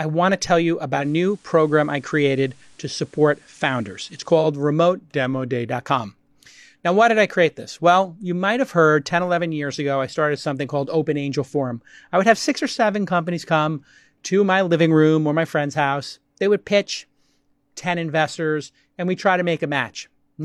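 Just after "want to tell you", from 0.94 to 4.5 s, faint hiss rises and level dips about 1 dB. This is digital radio blending to FM over a 120 ms cross-fade. From 5.14 to 5.68 s the speech slows 6.1% and drops about 109 cents before snapping back. From 16.46 to 17.06 s it runs 6.1% fast, about 103 cents sharp. Both are likely drift correction steps.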